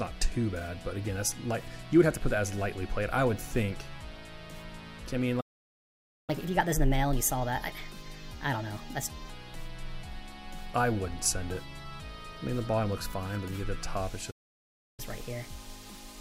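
The audio has two playback stalls, each followed by catch-up at higher speed. The first stall cuts the output to silence from 5.40 to 6.30 s, about 0.88 s. The second runs from 14.30 to 15.00 s, about 0.67 s. In both, the sound stops mid-flow and then resumes. The likely cause is the player running out of buffered data or its output thread being blocked, leaving nothing to send to the device until it recovered. Each stall is followed immediately by catch-up at higher speed. From 6.30 to 9.30 s, and again from 15.00 s to the end of the clip, playback runs at 1.25 times normal speed. The pitch rises by roughly four semitones because the backlog is being resampled rather than time-stretched. The first segment lasts 3 s and then drops back to normal speed and pitch. The second is still running fast when the clip ends.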